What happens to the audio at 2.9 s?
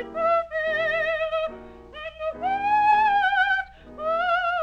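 At 2.88 to 2.93 s there is damaged data in the compressed stream. Corrupted bytes make the decoder misread those frames and lose sync until it locks onto the next valid frame header, which produces a brief chirp or squawk lasting about 50 ms.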